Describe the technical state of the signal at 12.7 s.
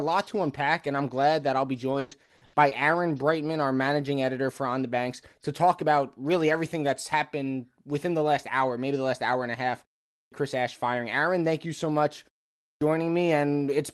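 Right after "thank you so much" and a 0.38 s pause, the next sound bursts in abruptly without its opening: a clipped start after a pause, 12.59–12.81 s, losing about 0.22 s while the output device wakes from silence.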